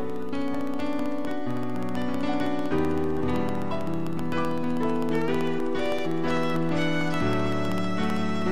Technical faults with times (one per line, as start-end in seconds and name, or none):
0.10-8.42 periodic USB or driver dropouts